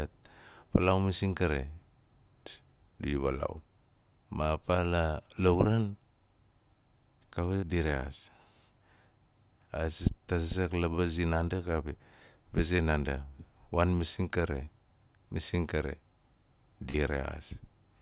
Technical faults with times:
7.56-7.64 burst of packet loss
12.76-12.80 short concealed packet loss
14.64-14.68 short concealed packet loss
16.90-16.96 short concealed packet loss

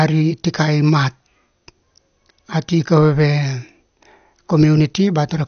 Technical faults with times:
0.00-5.47 MP2 compression

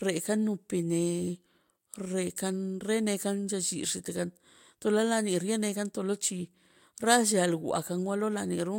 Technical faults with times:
none

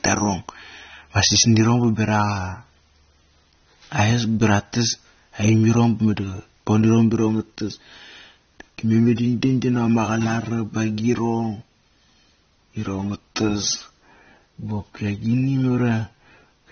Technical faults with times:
0.00-16.72 AAC compression

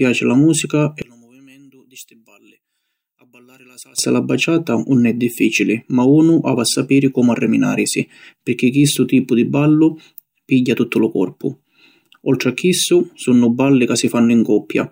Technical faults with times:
1.02-3.98 one channel inverted

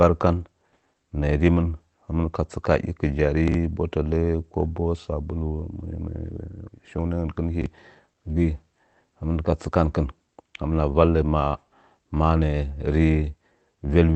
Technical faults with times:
3.48-3.54 chunks out of order
7.62-7.66 chunks out of order

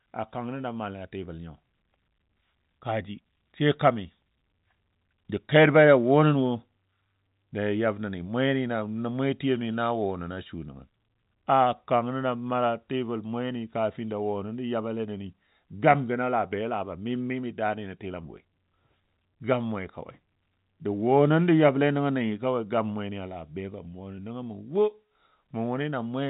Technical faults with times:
none

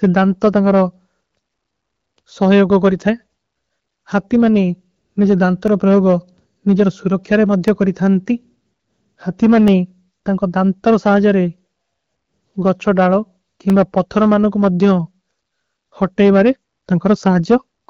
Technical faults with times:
0.00-17.90 hard clipping
1.68-17.68 periodic USB or driver dropouts

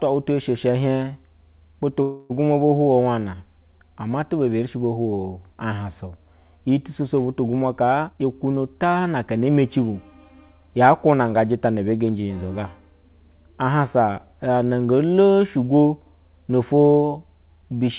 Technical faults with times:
2.02-2.32 call audio freeze
8.04-9.49 jitter buffer speed-up

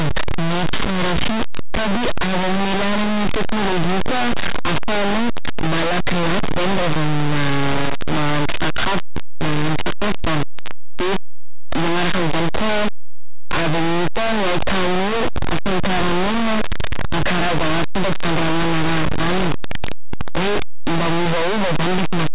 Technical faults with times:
0.00-22.34 linear audio read as companded

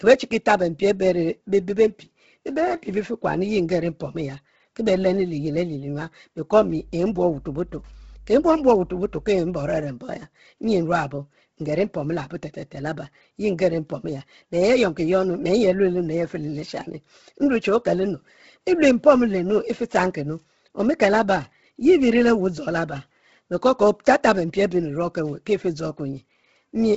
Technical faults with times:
0.00-26.96 Bluetooth LC3 compression
6.56-9.79 mains hum

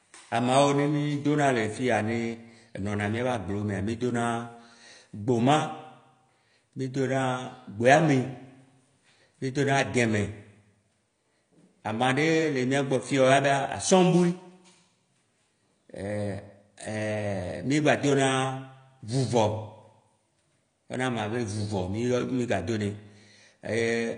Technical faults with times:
0.00-24.17 AAC compression

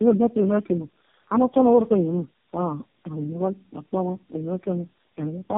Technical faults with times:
0.00-5.58 tandem speech coding

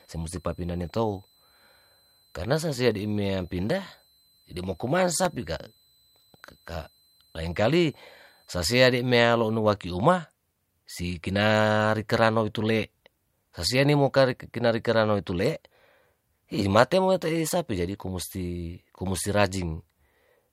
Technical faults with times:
0.00-9.59 switching supply whistle

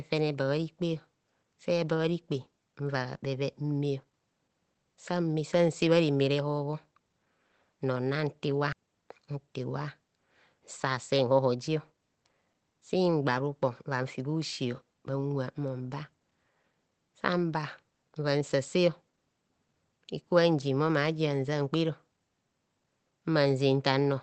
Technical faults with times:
8.72 skip ahead
10.60-12.33 jitter buffer speed-up

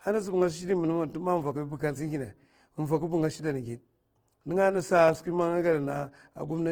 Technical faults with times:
0.00-6.72 Opus compression

